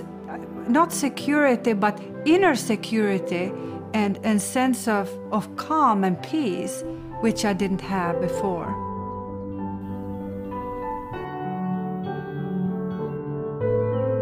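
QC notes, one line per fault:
9.81–13.17 s, pre-emphasis left on: the treble jumps to a thin, bright, hissy balance with exaggerated sibilance, about 14 dB up at 10 kHz relative to 1 kHz. The shape matches a 75 µs FM pre-emphasis curve whose matching de-emphasis was never applied on playback.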